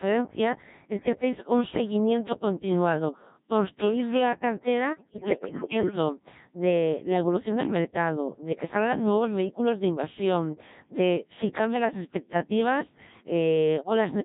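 Codec 2 vocoder runs throughout at 1.3 kbit/s: only pitch, voicing, energy and a spectral envelope survive, and the decoder rebuilds the speech from sine waves, so it sounds robotic and buzzy with heavy codec damage.

Bit errors on digital voice radio strike from 4.92 to 5.96 s, after "seguimiento continuado construir la" and before "de la evolución del". With roughly one bit in ten flipped, frame parameters go wrong, and the synthetic speech lurches in pitch and level and breaks into warbling, bleeping gibberish.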